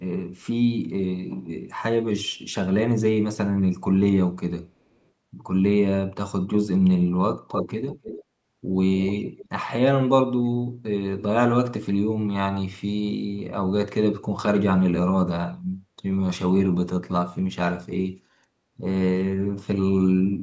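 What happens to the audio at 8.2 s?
From 7.88 to 8.24 s there is an echo leak: a faint copy of the speech returns 298 ms late, well below the direct sound, likely a far-end loudspeaker's echo canceller letting pickup through. Unlike room reverberation, it's a distinct repeat, not a smeared tail.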